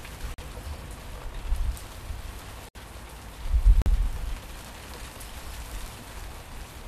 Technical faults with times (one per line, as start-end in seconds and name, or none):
0.34-0.40 corrupt frame muted
2.69-2.76 corrupt frame muted
3.82-3.88 corrupt frame muted